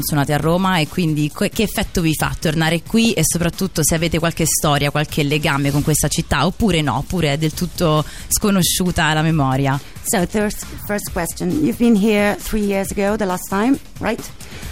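Short noise blips at 3.05–3.28 s and 6.43–6.63 s are DAB burbling: bit errors slipping past error correction throw individual MP2 sub-bands out of level.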